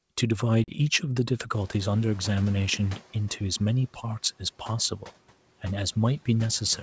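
At 0.64 s to 0.70 s there is packet loss on an ADPCM call. About 40 ms of audio drops out to hard-edged silence, which fits a couple of lost packets. Because ADPCM decoding depends on the predictor and step size tracked from previous samples, the decoder's state drifts away from the sender's during the gap. When the speech resumes, it comes back slightly distorted. This settles within a few tens of milliseconds as the decoder resynchronises.

From 1.5 s to 3.03 s the noise suppressor is catching up. At about 1.5 s the background room noise jumps by about 17 dB to roughly 25 dB below the speech, and the suppressor's noise estimate still reflects the quieter floor from before. The new noise therefore passes through with little reduction at first. Over roughly 1.5 s the estimate adapts, and the noise audibly sinks by about 7 dB, ending near 3.03 s.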